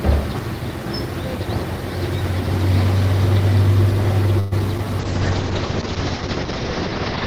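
At 4.39 s the audio stops moving forward for about 0.12 s, until 4.54 s. This is a call audio freeze. The last sound is stretched into a short fading buzz or hiss rather than silence. The likely cause is packets held up in transit, so the jitter buffer ran dry. When they arrived, playback resumed where it had stopped. Nothing is lost, but the audio now runs about 122 ms late.

Two short concealed packet losses follow. The first, from 4.60 to 4.62 s, drops about 21 ms of audio outright. The stream jumps ahead by roughly 20 ms, which claws back some of the delay. The second, from 4.78 to 4.86 s, loses 20 ms. The decoder patches part of that hole by continuing the previous sound, then blends back into the real signal. That leaves a brief smear or wobble and adds a little delay.

From 5.01 s to the end, a call bitrate drop sets in. The encoder falls from 40 kbps to 8 kbps after the connection's bandwidth estimate collapsed. 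At that rate Opus codes far more coarsely. It also narrows the audio band from 20 kHz down to about 6 kHz. The sound turns dull and muffled, with a rough, watery texture. It stays that way for the last 2.3 s or so without recovering.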